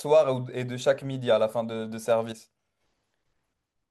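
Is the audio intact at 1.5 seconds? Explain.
Yes, the speech is intact at 1.5 seconds, with no dropout, click, distortion or other fault audible at that moment.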